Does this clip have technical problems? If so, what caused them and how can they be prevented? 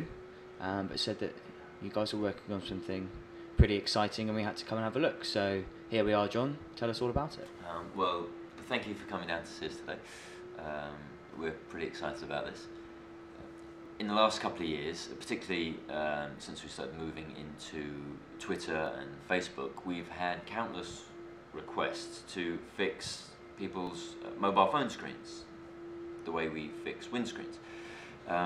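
Yes. Overlapping chunks cause a short click or stutter at 3.84, 8.85, 13.86, 18.86 and 23.87 s, one join every 5.0 s: each chunk starts 7.1 ms before the previous one ends, so that sliver plays twice. Aligning chunk boundaries exactly, or trimming the overlap, prevents it.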